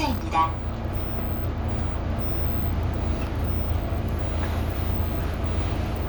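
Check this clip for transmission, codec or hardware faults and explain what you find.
One fault is present. Clock slip clicks run from 0.12 to 6.07 s, a soft rattle of about ten ticks per second. Each is likely one sample dropped or repeated by two unsynchronised clocks about 200 ppm apart.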